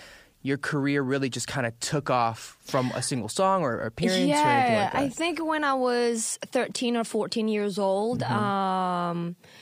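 At 6.71 s to 6.77 s a short burst of loose connector crackle scratches through the speech: a worn contact briefly making and breaking, chopping the signal. Unlike a single clean digital click, it is an irregular burst of crackle lasting about 60 ms.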